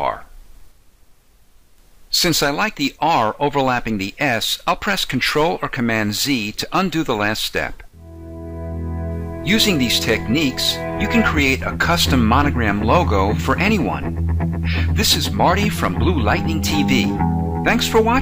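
Nothing goes wrong anywhere in this clip, so there's no technical fault to describe.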